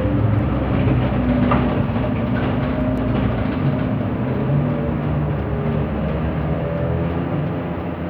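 A recording of everyday sounds with two bit error spikes. At 0.39 s, one sample jumps to about -31 dBFS. At 2.98 s, two samples reach about -25 dBFS. Each is a flipped bit, heard as a sharp broadband tick unrelated to the sound.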